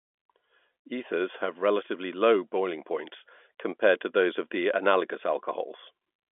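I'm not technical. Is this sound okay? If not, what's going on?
Yes, nothing is wrong here.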